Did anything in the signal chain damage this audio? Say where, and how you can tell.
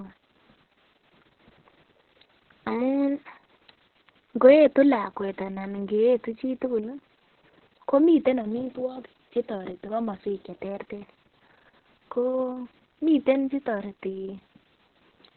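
Yes, at the codec stage: this speech carries heavy Opus voice compression from start to finish. Nothing sounds above about 4.2 kHz, so the band has been cut to narrowband, and the voice comes out muffled, hoarse and faintly robotic as the coarsely coded SILK excitation smears its texture. That pairing points to a very low rate, around 6 kbps. A simple low-pass or telephone filter would dull the top end but leave the remaining band clean rather than grainy.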